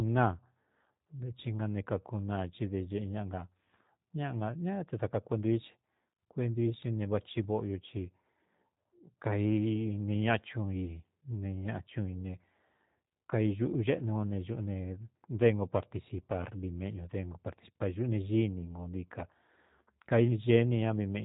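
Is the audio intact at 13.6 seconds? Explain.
No. At 13.6 s, as across the whole clip, the speech carries G.729 codec damage. Each 10 ms frame is resynthesised from a vocal tract filter, pitch predictor and sparse pulses, which fits an 8 kbit/s stream. Nothing above 3.8 kHz survives, and the voice sounds plainly rough and synthetic.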